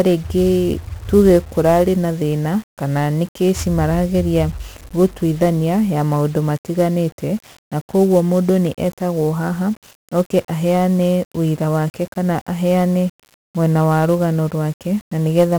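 From the first moment to the end, the speech carries the grit of 1-bit DFPWM compression. Each sample gets only one bit, nudging an adaptive level up or down, so the waveform is rebuilt as a staircase that constantly overshoots and chases itself. The damage here is heavy: a dense fuzzy crackle rides on every syllable, and the upper frequencies sink into hiss. The coarseness fits a rate around 48 kbps.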